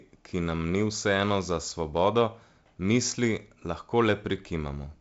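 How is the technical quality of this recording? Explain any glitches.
No glitches to report: the speech comes through a G.722 wideband telephone path at 56 kbit/s, with the band ending around 7.7 kHz and only the light hiss that coding brings.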